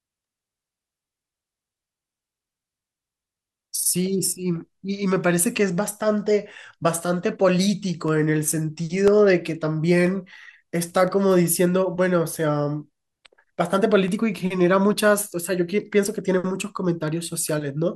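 Periodic USB or driver dropouts run from 8.08 to 17.08 s, one each second. Something blocks the audio path at a fixed interval, and each time a tiny slice, well under a millisecond, is replaced with silence, leaving regular ticks through the speech.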